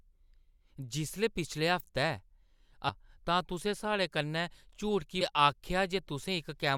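Three brief glitches break into this speech recording: at 0.60 s, just before "जिसलै पिछले", from 2.88 to 2.90 s, and at 5.20 s. The cause is damaged data in a compressed stream. Corrupted bytes at those points made the decoder misread frames and lose sync, so it skipped ahead to the next valid frame header and resumed there.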